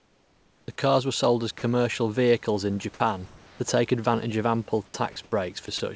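A speech recording over a call path, with nothing above 8 kHz, which fits G.722 at 64 kbps. From 0.00 to 0.68 s there is comfort noise in place of the background, likely from discontinuous transmission: the sender stopped sending during silence, so the real room noise is swapped for steady, featureless synthetic hiss about 4 dB quieter. Sound dropped by the voice detector occurs at 1.58–1.62 s, at 2.94–3.00 s just after "vehicles in", and at 3.26–3.60 s just before "take advantage of ample". In each case the detector likely mistook part of the sound for background and stopped sending, so up to about 0.2 s of sound vanishes under flat noise. Sound chopped by the voice detector follows at 4.86–5.32 s after "take advantage of ample" and again from 5.66 s to the end, likely because the detector toggled repeatedly. The speech turns choppy.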